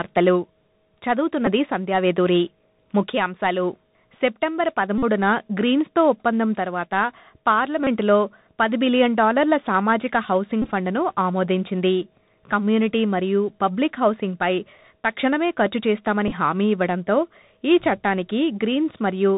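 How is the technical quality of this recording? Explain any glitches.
The technical quality is poor: the whole recording runs through a narrowband Bluetooth headset link, and five short buzzing glitches break into the speech.

Bluetooth CVSD headset codec, throughout: the audio is coded as a single up-or-down bit per sample at 64 kHz, with a step size that adapts. It passes nothing above 4 kHz, so the speech sounds boxed-in. The damage is plainly audible. Sibilants turn scratchy, loud bright moments distort where they outrun the step, and a granular hiss sits underneath. That grainy, slope-limited roughness is what separates it from a simple low-pass filter or a wideband codec's swirly artefacts.

Bluetooth headset packet repeated, at 1.46–1.48 s, 4.98–5.03 s, 7.84–7.88 s, 10.62–10.73 s and 16.28–16.32 s: voice packets were lost in the radio link, and the decoder replayed the last packet's bits instead of going silent. 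Each repeat recurs every 3.75 ms, which produces a short, steady buzz near 267 Hz rather than a gap or a click. The losses run about 11 ms, 45 ms, 30 ms, 52.5 ms and 18.8 ms. The last two are scattered, over 97.5 ms and 37.5 ms, with longest runs of roughly 15 ms and 7 ms.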